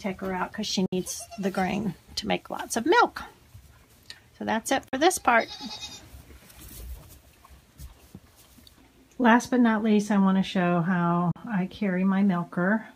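At 0.86 s, 4.88 s and 11.31 s the sound cuts to silence for about 60 ms, then 40 ms and 40 ms, and resumes further along as though it had kept playing. This is a Bluetooth dropout, likely from packets arriving too late to the headphones and being discarded. The gap sizes fit roughly three and two lost packets. On a waveform each appears as a flat hole. A spectrogram shows a clean vertical blank across all frequencies.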